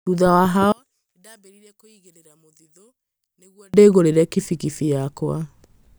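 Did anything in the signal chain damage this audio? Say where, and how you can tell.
Yes: one channel inverted, likely from reversed polarity in the analogue wiring. Summed to mono, the speech cancels from 0.72 to 3.74 s, dropping about 36 dB.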